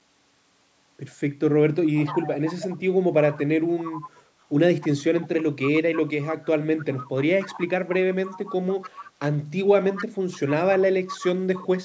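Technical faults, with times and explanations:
1.95–2.77 s, 3.3–4.11 s, 4.8–5.27 s, 5.94–9.11 s, 9.85–10.38 s and 11.08–11.67 s, echo leak: a second copy of the speech trails the original by a constant 0.29 s, at roughly 10 to 20 dB below it. The likely cause is a speakerphone whose echo canceller let part of the far side's audio back into its microphone. Unlike room reverberation, which is a smooth decaying tail, this is a distinct repeat at one fixed lag that comes and goes in separate patches.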